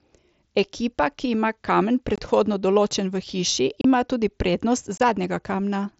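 Voice packets between headset and phone were dropped and replaced with silence or an idle pattern rather than patched, an unconcealed Bluetooth headset packet loss, over the wideband mSBC link. The speech breaks off abruptly at 2.16–2.18 s, 3.81–3.85 s and 4.98–5.00 s, leaving short holes of 22.5, 30 and 22.5 ms.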